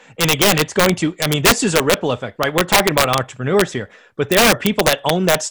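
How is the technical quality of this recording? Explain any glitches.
The recording is marred by integer overflow throughout its length, which produces harsh cracks on the louder moments of the speech. The signal is driven roughly 7 dB beyond the integer limit, and instead of being held at full scale, each peak that exceeds it wraps around to the opposite extreme. Only about one percent of samples go over, so the faults are brief but violent, far sharper than ordinary clipping. On a waveform, these appear as sudden full-height vertical jumps from top to bottom. On a spectrogram, they show as thin broadband streaks.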